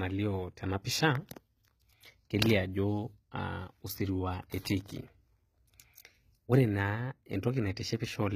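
A speech recording carrying plainly audible HE-AAC compression from start to finish. The treble stays bright but sounds synthetic: s sounds come out gritty and metallic, because the upper band is rebuilt from copied lower bands rather than coded, and nothing is present above 14.9 kHz. That brightness separates it from a plain low-pass or a standard AAC/MP3 encode, which dull the top instead. The damage fits a likely bitrate near 20 kbps.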